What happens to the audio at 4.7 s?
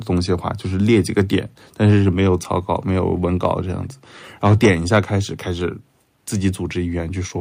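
Around 4.7 s the speech is inside a stretch of microphone overload running from 4.44 to 4.99 s. The peaks push roughly 7 dB past full scale, likely because the input gain is set too high, so their tops are flattened, giving the loudest syllables a harsh, crackling edge.

In the middle of that stretch, at 4.66 s, the microphone volume is stepped down. Voice and background drop together by about 2 dB in a single jump, likely the call software cutting the input level after detecting the distorted peaks.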